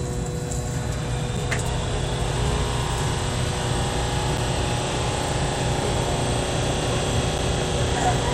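At 1.37, 4.37 and 7.38 s there's a gap between chunks: roughly 7 ms holes every 3 s, where silence is left at each chunk join.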